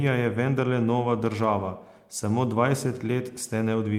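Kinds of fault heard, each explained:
No technical faults can be heard in this speech recording. The audio runs without any dropout, distortion, glitch or other defect.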